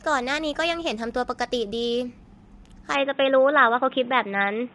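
Throughout, the speech sounds rough and grainy, with nothing above 11.6 kHz. Likely low-delay AAC compression (AAC-ELD) at a rate near 32 kbps, steady from start to finish.

From 2.95 s to the end, the band abruptly narrows to nothing above 3.8 kHz, the level shifts by around 5 dB, and a new noise floor appears some 35 dB down. There is no gap at the change. The likely cause is an input switched to a poorer device: a codec change would not bring its own hiss and level jump.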